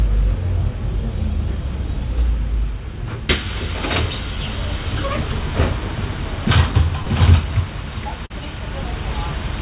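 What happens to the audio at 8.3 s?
A short concealed packet loss, from 8.26 to 8.32 s: about 40 ms never arrived, so the decoder extended the preceding sound, giving a brief smear rather than a silent gap.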